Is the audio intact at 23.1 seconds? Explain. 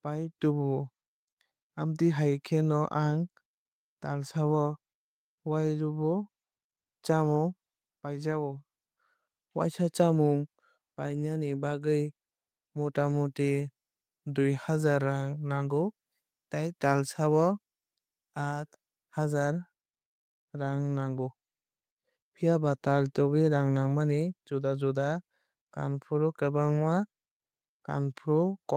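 Yes, at 23.1 seconds the speech plays through cleanly with no audible fault.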